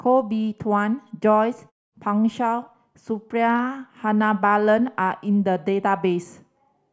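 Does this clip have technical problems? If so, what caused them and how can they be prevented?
No, there are no technical faults in this speech.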